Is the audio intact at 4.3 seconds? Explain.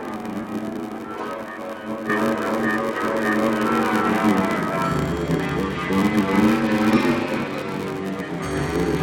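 No. A block size mismatch (padded) runs through the whole clip: one stage writes shorter blocks than the next reads, which fits a 512-sample read block, and the remainder is filled with zeros. The resulting gaps buzz at 93.8 Hz and stretch playback to 0.861 times normal speed, while the timbre stays.

From 2.10 s to the end, including 4.3 s, the input was likely switched to a poorer device. It passes a narrower band, so the sound turns duller. The level shifts by roughly 5 dB, and a new noise floor sits well below the signal, with no silence at the change.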